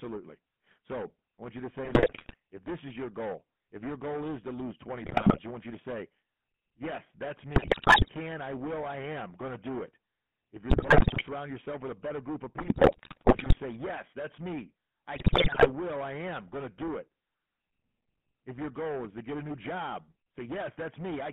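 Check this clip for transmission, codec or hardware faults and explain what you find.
Three faults are present: hard clipping throughout, GSM full-rate coding throughout, and six bursts of GSM bit errors.

Hard clipping runs the whole clip. The speech was driven about 13 dB past what one stage could pass, so roughly a fifth of the samples hit the ceiling and were cut flat. Those squared-off peaks add high harmonics, giving a harsh fuzz on every loud syllable.

The GSM full-rate codec also runs throughout. The line limits the band to 150 Hz to 3.4 kHz, and the codec rebuilds speech from a vocal-tract model driven by a sparse, regular pulse train, which fits the 13 kbps full-rate scheme. The result is a muffled, buzzy, gravelly roughness that is plainly audible.

GSM bit errors strike at 1.84 to 2.36 s, 5.04 to 5.39 s (just before "you want you to"), 7.56 to 8.09 s (before "I will I am"), 10.70 to 11.24 s, 12.58 to 13.59 s, and 15.16 to 15.69 s (between "that's me I" and "I am going to"). 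In each burst, corrupted filter, pitch and gain values reach the decoder, so the voice breaks into squawks, pops and gargling.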